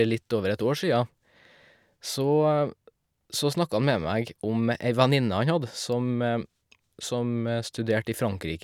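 No technical faults can be heard anywhere in this speech recording. At no point does the sound go wrong or call for a closer listen.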